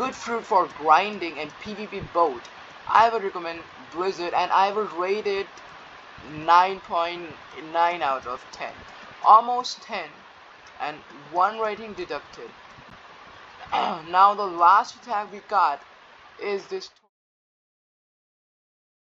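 The signal carries no technical faults, and the smooth fade at the end, easing out from about 16.5 s to 17.10 s, lowers the level without any click or hard edge.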